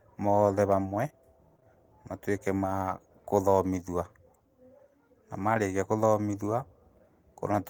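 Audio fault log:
1.57–1.65 s and 1.60–1.63 s, short concealed packet loss: a brief smeared wobble just before "matuĩke ma kũthomithua". Two 20 ms pieces of audio arrived too late, so the receiver continued the preceding sound for 12 and 15 ms, with the first stretching timing by about 7 ms, before blending back.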